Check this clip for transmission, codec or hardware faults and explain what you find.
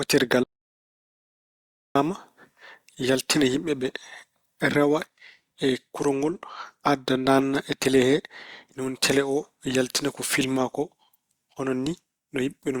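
One fault stands out, an audio dropout to silence near the start of the speech. From 0.43 s to 1.95 s the speech cuts off abruptly and the track falls silent, with no room tone or background hiss underneath. After about 1.5 s it resumes mid-flow just as suddenly. Whatever was said in that stretch is missing. The likely cause is a brief loss of the input, such as a disconnected device, a failed link or an accidental mute, while the recorder kept writing silence.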